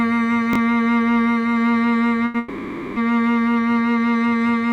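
A piece of music with three timing faults. At 0.53 to 0.56 s, chunks out of order: one chunk of roughly 11 ms was written a chunk late, so it plays after the one that should follow it. Nothing is lost, but the swapped pieces meet at hard joins, giving a brief jumbled flicker. At 2.25 to 2.36 s, a short stall from a late packet: the jitter buffer ran dry and the receiver stretched the last sound for 90 ms until the packet arrived, so a moment is held too long with a slight buzz or dip, then the music resumes where it stopped. At 2.38 to 2.98 s comes a longer call audio freeze, likely from packets held up in transit emptying the buffer again. The sound is drawn out as a fading buzz or hiss for 580 ms without dropping to silence, then carries on from the same point, leaving a gap inserted into the music rather than anything missing.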